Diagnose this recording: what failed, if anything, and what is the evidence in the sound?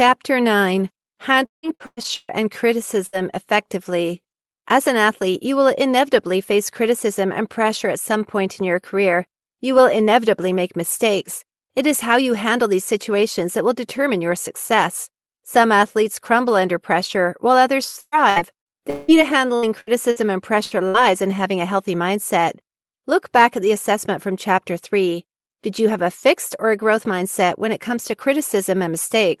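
Network packet loss hits the call twice, at 1.45–2.31 s and 18.01–19.11 s, with repeated packet loss (robotic sound). Each stretch holds five concealment gaps, the longest about 0.17 s and 0.18 s. The receiver kept extending the last sound, so speech turns choppy with pieces missing. On a spectrogram this appears as flat, smeared harmonic blocks, and the waveform shows copied periodic cycles.

Six short bursts of packet loss follow, also a network fault, at 3.06, 19.56, 19.81, 20.11, 20.64 and 20.89 s, each dropping about 60 ms. Concealment holds the last sound as a buzz or hiss that fades, then jumps ahead. The spectrogram shows brief constant-pitch bands dimming, and the waveform shows a decaying envelope before an abrupt resumption.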